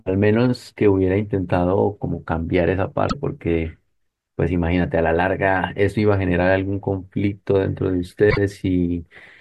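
At 3.07 to 3.15 s and again at 8.30 to 8.38 s, the speech skips forward and the next 80 ms come out corrupted, about three 26.1 ms frames. This is likely a broken MP3 bit reservoir: after a cut, those frames decoded against another frame's borrowed bytes.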